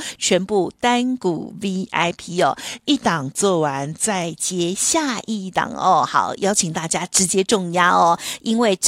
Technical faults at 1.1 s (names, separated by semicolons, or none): none